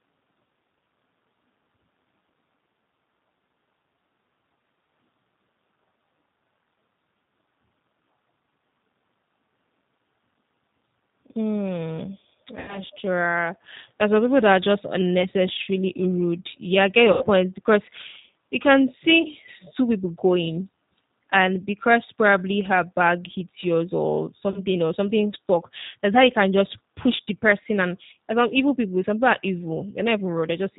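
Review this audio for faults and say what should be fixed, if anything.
The whole speech clip carries G.729 codec damage at 8 kbit/s. Speech is rebuilt from a vocal tract filter and sparse pulses, so it sounds rough and synthetic. A spectrogram shows a hard ceiling at 4 kHz with smeared, grainy harmonics beneath it. A wideband codec such as G.722 or Opus would prevent this.

VoIP packet loss concealed by the speech codec appears at 12.59–12.80 s and 17.12–17.29 s, each covering about 90 ms of missing audio, which points to three lost 30 ms packets. Shorter gaps of about 30 ms, pointing to single packets, fall at 19.22–19.27 s between "you can see" and "two people going", at 24.51–24.59 s between "bag hits yours or" and "or something stuck that's", and at 27.16–27.20 s between "you can just push" and "the person and and". In each, the decoder stretches its last pitch and filter into a fading buzz, and the speech recovers weakly afterwards. 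On a spectrogram these show as flat, repeated harmonic bands. The waveform shows a decaying, overly regular stretch. A jitter buffer with forward error correction, or a more reliable network path, would prevent it.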